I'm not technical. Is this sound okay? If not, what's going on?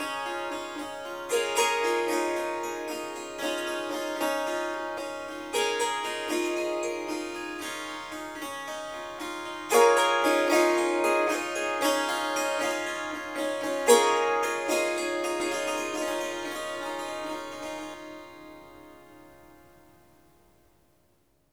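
No. From 15.4 to 17.94 seconds, everything is heard twice, with an equally loud copy trailing a little under half a second behind. This is a doubled audio track, likely from the same sound being captured again by a slower route.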